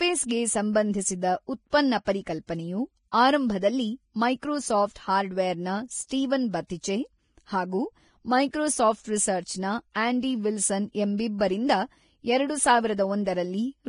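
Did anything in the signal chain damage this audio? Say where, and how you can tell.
Yes. Vorbis compression damage runs through the whole speech recording at the codec stage. Nothing is present above 10.6 kHz, and the treble that remains is hissy and grainy, with fricatives smeared into noise and consonant onsets blurred. This is the likely result of low-bitrate Vorbis encoding. The lowered cut-off and coarsely quantised residue replace fine high-frequency detail with noise of similar energy, and the heavy damage fits a bitrate of roughly 28 kbps.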